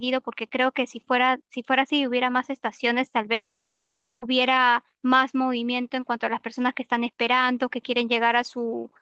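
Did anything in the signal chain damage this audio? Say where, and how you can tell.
Yes, network stage: from 3.33 to 4.23 s a fading buzz replaces the speech, then a flat waveform and blank spectrogram gap, likely a long network dropout.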